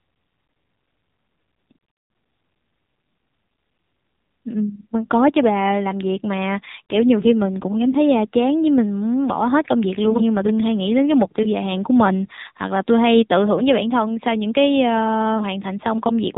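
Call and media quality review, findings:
AMR narrowband mobile codec, throughout: nothing above 4 kHz, plainly buzzy, synthetic voicing. Coarse pulse-driven vocal-tract model fits a low AMR-NB mode around 7.4 kbps.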